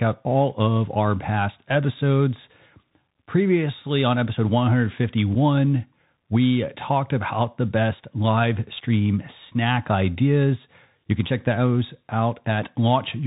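From start to finish the speech carries the sound of a Bluetooth CVSD headset codec. This one-bit delta scheme only tracks whether the waveform rises or falls, so its adapting step size lags on loud, bright sounds. The distortion is plainly audible: sibilants grate, and a granular hiss sits beneath everything. That fits a 64 kbps link. On a spectrogram the energy stops abruptly at 4 kHz, with a grainy noise floor filling the band below.

At 5.35 s there is unconcealed Bluetooth headset packet loss. About 3.8 ms of audio, likely a single packet, never arrived and was replaced by silence or an idle pattern with nothing to mask the gap. It is heard as a short hole with abrupt edges, with the speech resuming slightly quieter for an instant. The waveform shows a tiny notch with sharp edges. The spectrogram shows a thin vertical broadband line at the edges of the gap.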